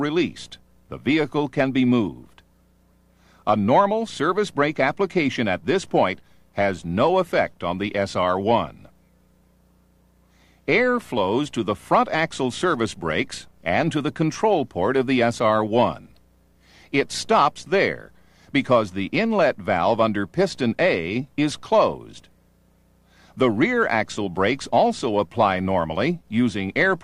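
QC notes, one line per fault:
No faults heard anywhere in this audio.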